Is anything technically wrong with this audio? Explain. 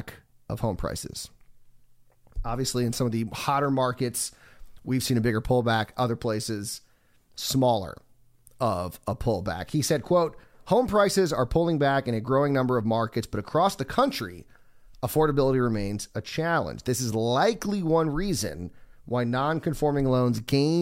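No, nothing technically wrong can be heard in this speech recording.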